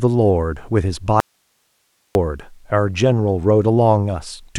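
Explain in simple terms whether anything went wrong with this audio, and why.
From 1.20 to 2.15 s the speech cuts out abruptly, leaving only faint hiss: an audio dropout to a faint residue, likely a brief signal loss upstream.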